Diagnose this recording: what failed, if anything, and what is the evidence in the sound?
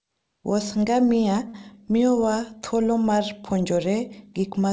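At 1.48 to 1.56 s a speech sound is drawn out for 57 ms, nothing lost: a short stall from a late packet emptied the network jitter buffer.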